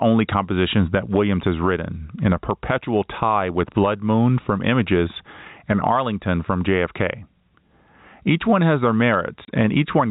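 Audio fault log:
Throughout: gain pumping. The gain swings by roughly 15 dB. Loud and quiet passages sit squashed close together, likely from gain set far too high with a fast limiter clamping it back on each loud sound.
9.45 to 9.48 s: packet loss filled with silence. A single 30 ms hole cuts the speech outright, with abrupt edges. It fits one lost packet whose gap the receiver filled with silence instead of concealing it, all within a 4 kHz telephone band.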